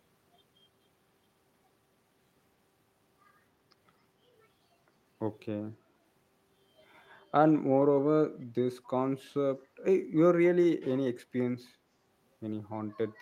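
At 8.84 to 8.88 s, a brief echo leak appears. A very faint copy of the speech returns 269 ms late, likely from a loudspeaker's imperfect echo cancellation.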